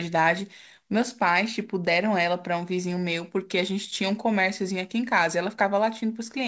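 No faults found in the speech; the call-path coding holds the band to 8 kHz, consistent with a G.722 wideband codec.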